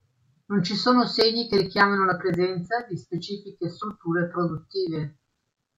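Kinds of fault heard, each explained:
Nothing wrong turns up anywhere in this bit of speech, so there's no fault to list.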